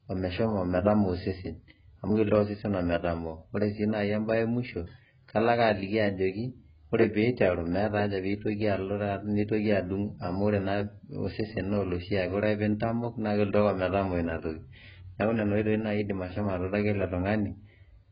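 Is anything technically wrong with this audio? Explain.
Yes. Throughout the speech, nothing reaches above 5 kHz, and the remaining band sounds dull, smeared and warbly, with fizzy sibilants. This is likely heavy AAC compression, fitting AAC-LC at roughly 12 kbps. Starved of bits, the encoder lowered its cut-off and quantised coarsely. A plain low-pass filter would dull the sound without the warble and fizz.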